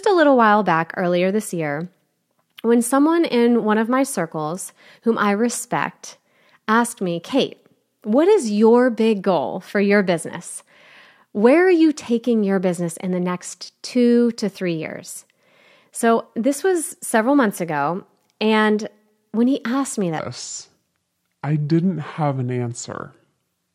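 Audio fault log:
20.19–23.74 s, section at the wrong speed: right after "when he asked me", the speech slows to 0.733 times normal and drops roughly five semitones at once, likely from playback against the wrong clock. Unlike a pitch shift, timing stretches too, lasting to the end.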